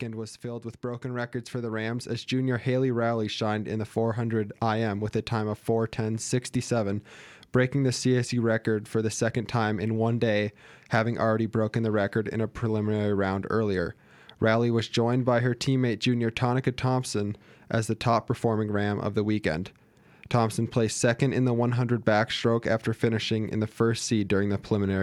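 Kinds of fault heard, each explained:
Automatic gain rising: the gain control judged the input too quiet and lifted its level step by step, so from 0.41 s to 6.33 s the speech and the background noise behind it grow louder together, by about 10 dB overall. What separates this from a speaker simply raising their voice is that the noise floor climbs in lockstep with the speech. The slow, steady ramp, lasting several seconds, also distinguishes it from a sudden level jump or a fade applied in editing.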